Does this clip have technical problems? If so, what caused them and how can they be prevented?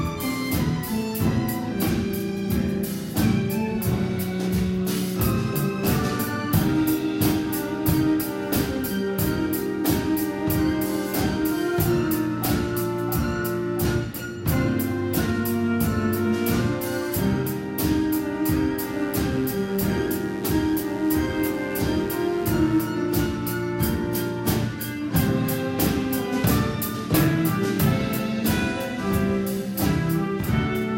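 Yes. From 18.84 to 22.93 s, mains buzz gets in, likely through a dimmer, rectifier or unshielded cable injecting switching spikes twice per 50 Hz cycle. The result is a raspy, steady buzz of 50 Hz harmonics reaching into the kilohertz range, sitting roughly 20 dB below the signal. Using shielded, balanced cabling and keeping the recording chain away from dimmers and switching supplies prevents it.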